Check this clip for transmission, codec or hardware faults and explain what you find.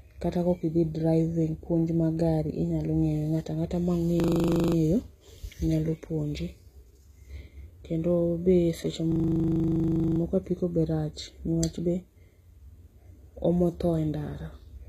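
Two problems here: a codec sound that runs through the whole clip, and two spots where the audio locks into a stuttering loop.

The whole clip has plainly audible HE-AAC compression, or likely something close to it. The speech's upper range is reconstructed rather than carried: the codec sends the lower band properly and fills in the top by copying lower bands upward under a rough envelope. That's why the sibilants come out gritty and metallic, with nothing at all above about 14.9 kHz. The damage is heavy enough to point to a low bitrate, somewhere around 20 kbps.

From 4.2 to 4.76 s, and again from 9.12 to 10.2 s, there's a system hang loop. The machine or driver stalled while the audio hardware kept replaying the same 40 ms buffer. The first loop repeats 14 times and the second 27 times, giving a buzzy stutter at 25 Hz. The speech resumes afterward with essentially nothing missing, so the stall just pushed everything later.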